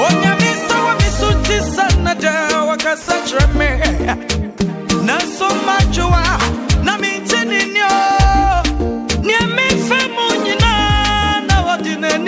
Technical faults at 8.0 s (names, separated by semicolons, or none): none